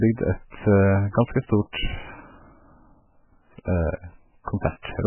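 A speech recording with heavy coding damage throughout. The treble is gone: nothing is audible above 3 kHz. The remaining band has a watery, swirling texture as weak spectral components drop in and out between frames, and s sounds come out thin and chirpy. That combination of a hard top cut and unstable detail is the signature of MP3 compression, likely at a very low bitrate in the region of 8 kbps.

From 1.72 to 1.74 s a brief hiss, about 21 ms long, runs ahead of a sharp attack, which itself sounds softened. This is pre-echo. The transform block covering that moment spread the quantisation noise needed for the loud onset across the whole block, including the quiet stretch just before it.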